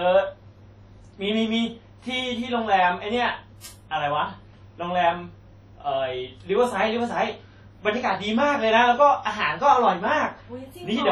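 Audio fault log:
throughout: WMA compression. The whole clip has heavy transform-codec damage: a ringing, washy quality with a hiss that rises and falls with the level of the sound, and weaker detail between the stronger components dropping out. This is the likely result of WMA encoding at a low bitrate, which fits something around 32 kbps. With long blocks, quantisation noise smears across tens of milliseconds, and the encoder discards weak lines, so the sound loses definition. Content extends up to 20 kHz.
3.60–3.64 s: pre-echo. A brief hiss of about 36 ms comes just before a sharp onset, and the attack itself sounds softened and smeared. The transform block spreads its quantisation noise evenly over its full length. Because this attack falls late in the block, noise sized for the loud part also fills the quiet stretch before it, where nothing masks it, so it is heard as a short lead-in hiss.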